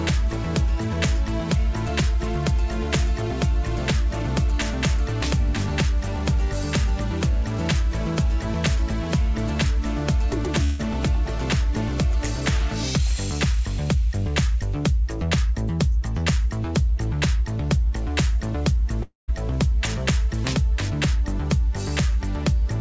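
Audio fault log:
10.64–10.84 s and 19.03–19.30 s, long network dropout: audio stopped arriving, likely from lost packets. The receiver stretched the last sound into a fading buzz, for about 150 ms and then about 250 ms. The second fill ends in about 150 ms of silence. Each time the audio resumes with a short piece gone.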